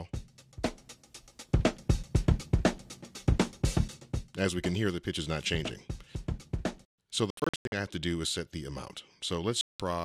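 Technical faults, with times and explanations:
7.30–7.72 s and 9.61–9.80 s, Bluetooth dropout: the sound cuts to silence, first in short bursts totalling 0.3 s (longest 93 ms), then in one 186 ms gap. It resumes further on rather than where it stopped, unlike an underrun, likely from packets reaching the headphones too late.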